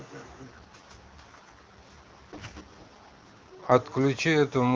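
From 0.43 to 3.72 s there's an AMR rate drop: the speech turns rough and synthetic, consistent with the codec falling from 23.85 to 6.6 kbit/s, then clearing up.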